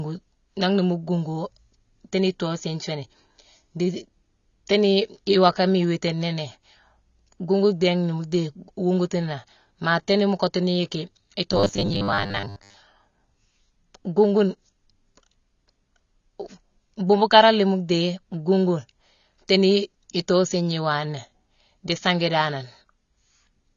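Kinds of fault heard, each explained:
AAC compression: The whole clip is band-limited. The speech sounds dull and smeared, with plainly audible coding damage and a fizzy edge on sibilants. This likely comes from AAC-LC encoding at a low bitrate, perhaps around 24 kbps.
Robotic sound from repeated short buffers: From 11.52 to 12.77 s the speech becomes a rigid metallic buzz at 100 Hz. That pitch fits a 10 ms chunk being replayed. Most of this stretch seems repeated rather than new, likely because audio arrived too seldom.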